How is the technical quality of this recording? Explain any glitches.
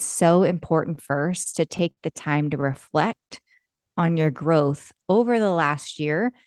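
The recording has two timing glitches, both from network packet delivery rather than from the microphone or the room.

From 0.95 to 1.99 s, just before "the time to", there is repeated stalling, a stutter. Packets arrived late, so the jitter buffer emptied seven times, and the receiver stretched the last sound to fill each hole, about 134 ms in all and up to 60 ms at once, with nothing actually lost. It sounds halting and choppy. On a spectrogram, harmonics smear flat into short frozen stretches; the waveform shows repeated, fading copies.

From 3.07 to 4.32 s, between "the time to" and "growth over the", there is a jitter buffer slow-down. To rebuild its reserve, the receiver repeated single pitch periods many times, adding about 146 ms and playing this passage at roughly 89% speed without changing pitch. It sounds drawn out. A spectrogram shows stretched formant trajectories at steady harmonic spacing, and the waveform shows near-identical cycles repeated in runs.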